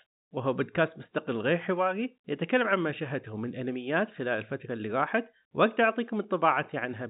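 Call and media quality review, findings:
No faults found.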